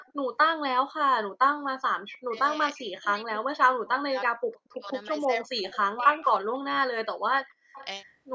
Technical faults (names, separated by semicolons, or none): echo leak; speech suppressed in double talk; background gated by the echo canceller